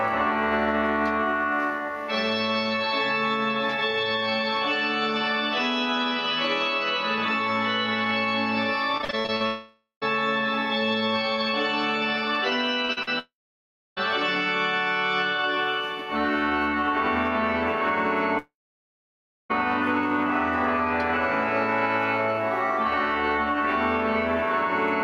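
Repeated packet loss (robotic sound) begins at 8.97 s and runs to 9.42 s: seven short holes, the longest about 47 ms, are each patched by stretching the preceding sound, so nearly half of that stretch is filled-in material and the audio turns choppy. The same chopping returns from 12.85 to 13.09 s, with four holes up to about 41 ms long.

A long network dropout likely follows the first burst, from 9.46 to 10.03 s. The last sound is drawn out as a fading buzz or hiss, ending in about 0.14 s of silence before the audio resumes with that portion missing. Similar gaps come at 13.19 to 13.98 s, where roughly 0.66 s is silent, and at 18.38 to 19.51 s, the longest, with close to a second of silence after the decaying tail.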